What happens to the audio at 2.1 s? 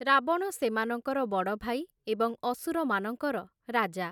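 Nothing goes wrong at 2.1 s; the speech carries on intact through that moment, with no dropout, click or distortion to be heard.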